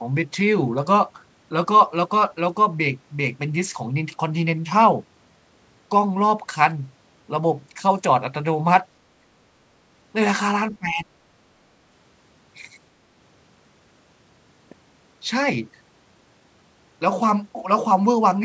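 From 10.72 to 11.05 s the speech suddenly ducks by around 20 dB, most likely speech suppressed in double talk, with the echo canceller clamping down during overlap.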